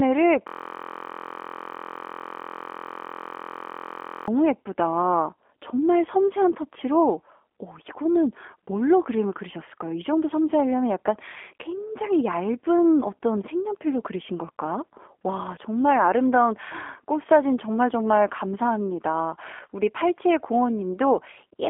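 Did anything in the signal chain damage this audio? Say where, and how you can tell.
Yes, two stages damaged it.

At the codec stage, the whole clip carries G.729 codec damage. The speech is band-limited to roughly 250 Hz to 3.5 kHz with nothing above 3.7 kHz, and it has a rough, slightly synthetic texture, which fits an 8 kbit/s G.729A encoder rebuilding each frame from a filter, a pitch predictor and a few pulses. A plain telephone-band filter would dull the sound without that buzzy, rebuilt graininess.

At the driver or buffer stage, a system hang loop runs from 0.48 s to 4.28 s. A single 23.22 ms slice of audio repeats exactly, well over a hundred times, at 43.1 Hz, so it sounds like a steady buzz at that rate rather than like speech. The length fits a 1024-sample ring buffer that the hardware kept replaying while the host stalled. Packet-loss concealment would fade or vary its repeats, but these are identical copies at a constant level.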